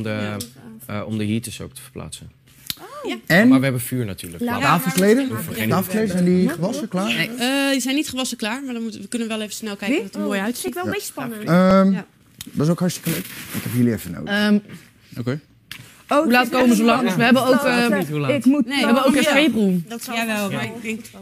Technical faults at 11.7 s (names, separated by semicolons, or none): dropped samples